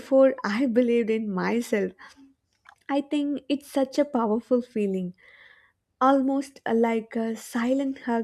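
Nothing stood out on listening to this recording of speech.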